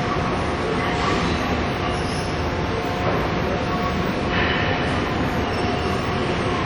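From start to finish the sound carries plainly audible transform-codec damage, likely WMA compression. Nothing reaches above 17.4 kHz, so the top end is cut flat. Quantisation noise is smeared across long blocks, tens of milliseconds each. Transients ring and blur into a washy tail. A hiss swells and falls with the signal. Weak detail drops out entirely, which fits a low bitrate of around 48 kbps.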